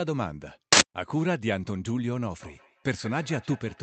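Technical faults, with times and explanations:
0.73–0.81 s, uninitialised buffer: an 85 ms burst of loud digital noise as a stale block, which fits a 4096-sample buffer, played before audio was written.
2.41 s to end, feedback echo between two devices: sound recirculates roughly every 150 ms, peaking about 19 dB below the speech, as a second device replays what the other device's microphone sent.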